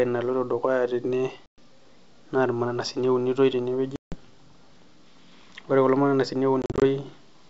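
Packet loss on an ADPCM call breaks the speech three times: 1.46 to 1.59 s (120 ms missing), 3.96 to 4.17 s right after "naa irmananasini eunitoi" (160 ms), and 6.62 to 6.83 s, where 120 ms is lost in short scattered gaps of up to 40 ms. Each hole is hard-edged silence from about seven dropped packets. The decoder's predictor and step size then disagree with the sender's, so speech resumes with brief, slight distortion. The wideband G.722 coding is clear up to 7 kHz with a faint upper-band hiss.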